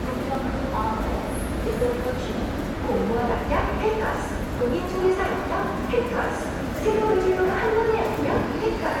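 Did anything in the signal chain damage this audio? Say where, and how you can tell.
Yes. At 0.35 s there is a brief glitch. That is damaged data in a compressed stream, a fault at the codec and storage stage. Some of the encoded bytes there were lost or corrupted, so the decoder misread the affected frame, lost sync, and skipped ahead to the next valid frame header.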